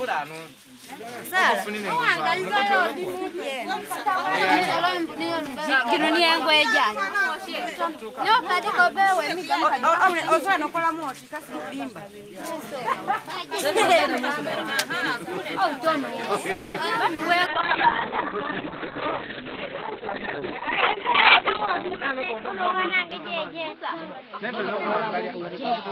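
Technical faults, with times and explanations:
16.51 to 16.77 s, call audio freeze: the sound stalls and the last moment is stretched into a fading buzz or hiss for 0.23 s before resuming where it left off. Delayed packets likely emptied the jitter buffer, so a gap was inserted rather than anything lost.
17.14 to 17.21 s, short concealed packet loss: a brief smear or wobble of 40 ms. That slice of audio never reached the decoder in time, so the receiver extended the preceding sound to cover the hole and then blended back into the real signal.
17.5 s to the end, call bitrate drop: the sound turns rough and muffled, with everything above 4 kHz gone. The encoder was pushed from 40 kbps down to 6 kbps, holding the lowest rate for about 4.6 s, coding coarsely and narrowing the band from 20 kHz.
21.93 to 25.72 s, jitter buffer speed-up: the sound runs about 2% fast at unchanged pitch. The receiver, holding surplus buffered audio, trimmed short pitch-period pieces over and over, removing roughly a tenth of a second in total to cut the delay.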